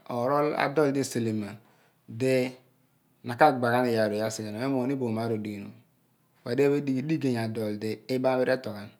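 Recorded speech, with no technical faults to report. Nothing in the signal chain calls for a time, a cause or a correction.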